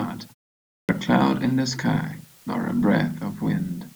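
A steady, even hiss sits under the speech from start to finish, with no grit or distortion riding on the louder parts. This is low bit depth with dither: the audio is carried at only 8 bits, and random dither noise is added before each sample is rounded, so the rounding error turns into smooth white noise rather than harsh distortion. The hiss sits roughly 30 dB below the speech.

At 0.71 s, after a pause of about 0.45 s, the speech bursts in abruptly, already mid-sound, with its opening missing up to 0.89 s. This is a clipped start after a pause: the output device went idle during the silence and needed time to wake or relock, so roughly 180 ms of the returning speech was swallowed before playback resumed.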